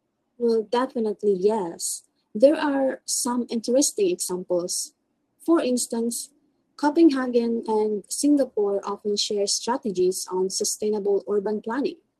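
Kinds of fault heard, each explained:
Clock drift between sender and receiver: The sending device's audio clock runs fast, by around 4 percent, so samples arrive quicker than the receiver plays them out. The jitter buffer keeps filling, and the receiver has to throw away small slices of audio to stop it overflowing. Across the whole clip this appears as speech that moves slightly too briskly, interrupted by tiny uneven hiccups rather than one obvious break.
Repeated timing corrections: To keep pace with the faster sender, the receiver repeatedly trims short pieces from the stream, all in the same direction, from 0.14 s through to the end at 12.20 s. The net effect is playback running at about 104 percent speed. Each cut is brief and the cuts are irregularly spaced, so the speech carries faint stumbles and a subtly unsteady tempo rather than clear gaps.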